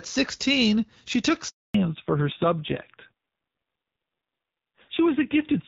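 Handover gap, from 1.48 to 1.74 s, right after "she took". The call was passed from one network to another, and for about 260 ms no speech frames reached the receiver while the link was re-established. The speech fades out within a few tens of milliseconds and then there is dead silence until the new connection carries audio again, so whatever was said in that quarter-second is simply gone, not muffled or garbled.

Fallback to narrowband, from 1.74 s to the end of the clip. Before the gap the speech carries the airy top end of HD Voice, consistent with AMR-WB at a clear rate such as 12.65 kbit/s. After the handover the new link settled on an older narrowband codec, and nothing above 4 kHz survives. Sibilants lose their crispness and the voice turns duller and somewhat rough, which fits a drop to AMR-NB at a low rate around 5.9 kbit/s.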